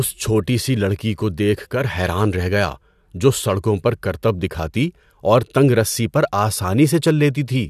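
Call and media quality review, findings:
No faults found in the speech audio; no dropouts, distortion or timing problems to report.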